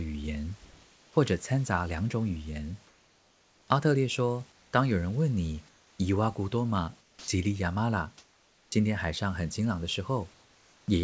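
Comfort noise in place of the background appears at 0.65 to 1.16 s, 2.87 to 3.68 s, 4.52 to 4.73 s, 5.69 to 5.99 s, 7.01 to 7.28 s, 8.18 to 8.72 s and 10.34 to 10.88 s. In each pause between speech, the real room background, sitting about 32 dB under the speech, gives way to a flat, featureless hiss. That hiss is about 2 to 3 dB quieter than the background, and about 8 dB quieter at 7.01 s. The likely cause is the sender halting transmission during silence and the receiver synthesising noise to fill the pause.

An onset clipped by the voice detector follows at 7.20 to 7.28 s. The first 80 ms of returning speech never arrived, so the comfort noise runs straight into an abrupt, hard start with no gentle rise. The likely cause is a voice detector that was slow to register the sound. Throughout, the band stops at 8 kHz, which fits a G.722 call path.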